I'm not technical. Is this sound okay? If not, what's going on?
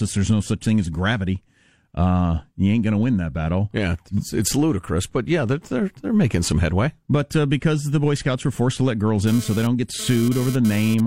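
No. From 9.27 to 11.00 s there is GSM phone buzz. A nearby mobile phone's radio bursts leak in as a raspy buzz, pulsing 217 times a second.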